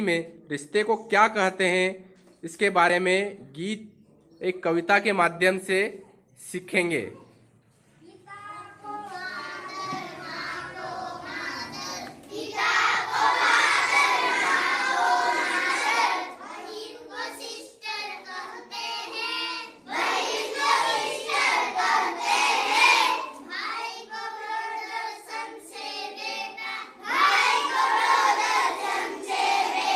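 No technical faults can be heard anywhere in the audio, and the signal holds steady throughout.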